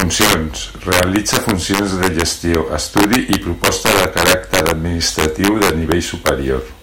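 Integer overflow runs through the whole speech clip. The signal was pushed about 8 dB past the integer limit, and nothing held the peaks back. Instead of stopping at full scale, each peak that crosses the limit wraps around to the opposite extreme. Around one percent of the samples do this. They cluster on the loudest syllables. Each one is heard as a violent crack, far harsher and more abrupt than ordinary clipping.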